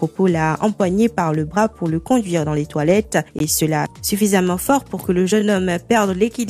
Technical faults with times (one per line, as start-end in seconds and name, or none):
3.39 block of digital silence